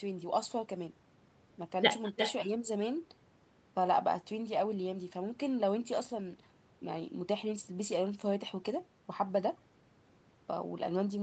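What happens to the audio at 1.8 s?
At 1.8 s the speech is shadowed by a quieter, thinner copy of itself arriving roughly 0.4 s later, at about 9 dB below the direct sound. This is echo with no canceller, and it runs through the whole clip, not just this moment. The far end is playing the call on a loudspeaker, its microphone captures that playback, and nothing subtracts it, so the talker's own speech returns after the network round trip.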